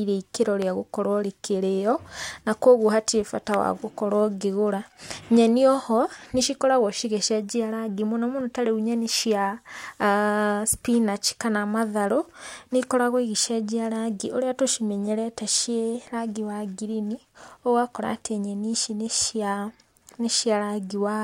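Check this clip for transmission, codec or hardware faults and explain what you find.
Two loud pops occur in the speech. A sudden voltage spike, likely from a plug, switch or static discharge, is added to the signal at 0.62–0.64 s and 3.54–3.56 s, producing single sharp pops about 10 dB and 15 dB above the speech.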